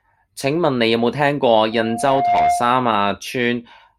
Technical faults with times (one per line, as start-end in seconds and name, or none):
1.72-2.97 loudspeaker feedback squeal